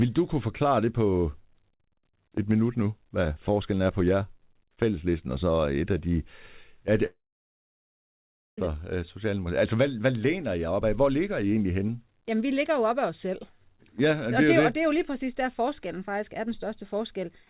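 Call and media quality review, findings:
Audio cuts out at 7.06 s and returns at 8.58 s. A short smeared concealment tail fades almost immediately into about 1.4 s of near-silence, and playback resumes with roughly 1.5 s of the speech gone. The likely cause is a long network dropout: packets stop arriving, the jitter buffer conceals briefly, then outputs quiet until the stream recovers. Band-limited to 4 kHz throughout, consistent with a 64 kbps G.711 A-law call path.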